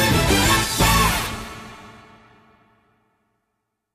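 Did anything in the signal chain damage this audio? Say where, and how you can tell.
No, nothing along the chain has left an audible mark on this signal, which reaches the listener with its level, continuity and timing intact.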